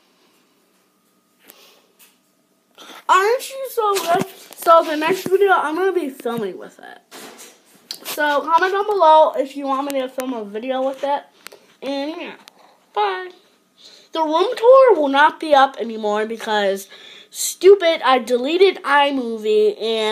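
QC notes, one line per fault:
No fault found.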